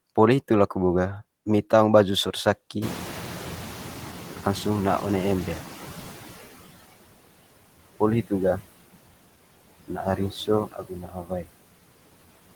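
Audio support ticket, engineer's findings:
Noise suppressor artifacts, whole clip. Background pulled down by about 19 dB frame by frame, so the residual pumps, sinking in gaps and lifting under speech. Component: noise suppressor; per-band gain swinging between frames.

Noise suppressor catching up, 2.82 to 6.44 s. Room noise jumps by about 24 dB near 3 s and first passes through with less reduction. The suppressor's noise estimate lags and takes about 3.6 s to converge before reaching about 15 dB of reduction. Component: suppressor noise tracker, slow adaptation. After the rise the room noise sits only about 14 dB under speech.

Speech cut by the noise suppressor, 9.87 to 10.49 s and 10.66 to 11.50 s. Speech is swallowed, with drops of about 17 dB. The first span loses roughly a fifth of a second. The second loses most of its length. Component: noise suppressor misclassifying low-level speech as noise.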